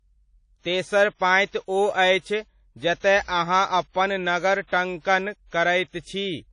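WMA compression runs throughout the speech, likely from an early WMA encoder at a low bitrate, which fits about 32 kbps. Long transform blocks smear quantisation noise around each syllable, leaving a ringing, washy hiss that swells with the voice, and nothing above 10.1 kHz.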